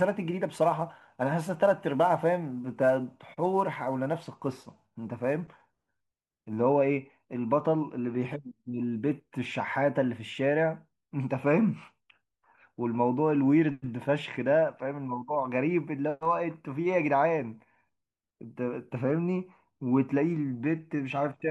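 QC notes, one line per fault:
0.00–6.57 s: sample clock jitter. Timing wobbles by a few microseconds. This adds rough hiss, roughly 35 dB down, on loud, bright speech, gone in pauses.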